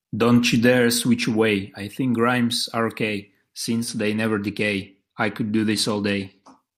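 Speech whose treble dulls and turns gritty from 3.88 to 6.57 s, a Bluetooth SBC bit pool drop: congestion starved the high sub-bands, which fits a fall to about 99 kbps.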